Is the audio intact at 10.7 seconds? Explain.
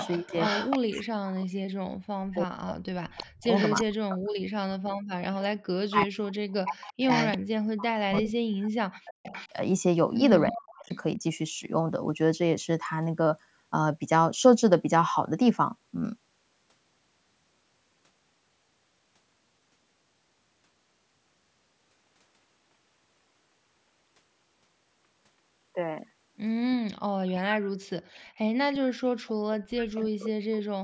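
No. From 10.48 to 11.01 s there is an echo leak: a second copy of the speech trails the original by about 0.35 s, roughly 10 dB quieter. This likely comes from the far side's loudspeaker reaching its microphone, with the echo canceller failing to remove it. The fixed lag and weaker, separate copy distinguish it from reverberation, which smears sound continuously rather than repeating it at one delay.

Overlapping this, from 10.48 to 11.17 s, the speech is suppressed in double talk. The main speech drops sharply, by around 40 dB at its deepest, in pieces adding up to about 0.4 s. This is likely the echo canceller muting the near talker because it could not separate that speech from the echo while both sides were active. Unlike packet-loss dropouts, these gaps occur only while both sides are active.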